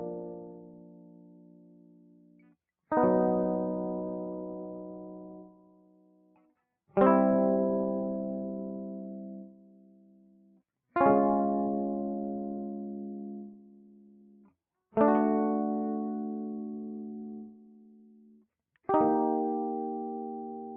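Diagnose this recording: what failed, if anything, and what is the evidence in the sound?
Call processing failed. A speech noise suppressor stayed on for this music and pumps its sustained sound by about 15 dB, so the waveform envelope swells and sags unevenly.

Sound cut by the noise suppressor at 0.2–2.56, 5.46–6.54, 9.46–10.61, 13.49–14.53 and 17.46–18.46 s: drops of about 12 dB appear as darkened spectrogram bands.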